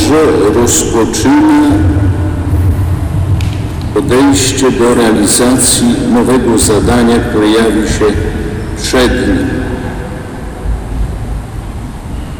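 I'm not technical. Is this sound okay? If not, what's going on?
No. Somewhere along the way the sound was pushed far louder than one stage of the system could handle, so the tops of its loudest moments were sliced off flat. This is called hard clipping, and it runs from start to finish, catching a sizeable share of the sound rather than just the odd peak. Those flattened edges add a harsh, gritty fuzz that sits on every loud part instead of the clean original.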